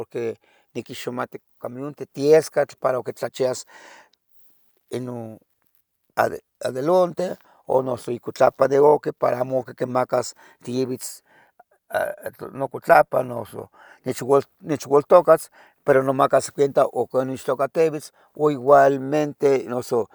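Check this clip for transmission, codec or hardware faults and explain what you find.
Listening through the speech, nothing stood out that would point to a transmission, codec or hardware problem.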